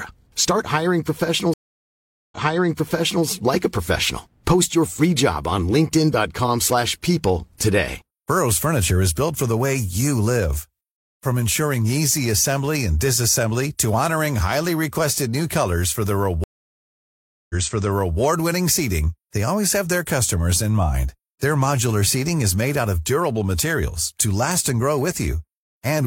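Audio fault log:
1.54–3.25 s and 16.44–18.19 s, stream reconnect. The speech drops out, for about 0.78 s and then 1.06 s. Playback comes back earlier than where it stopped, by 0.93 s and 0.70 s, so a short stretch repeats. The second resumes at "seating they always have". The connection broke and the player went quiet. It rejoined and started a new decoder partway through. The server resent recent audio, which caused the backward jump.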